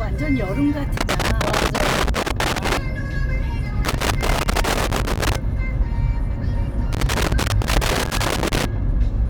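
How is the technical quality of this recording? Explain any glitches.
The recording has a recurring technical fault: loose connector crackle in three bursts. They run from 0.97 to 2.77 s, from 3.85 to 5.36 s, and from 6.93 to 8.65 s. Each lasts under two seconds. A worn or dirty contact is touching and separating many times a second. That chops the signal on and off. Any DC on the line turns each break into a pop. The result is an irregular, scratchy crackle over the sound.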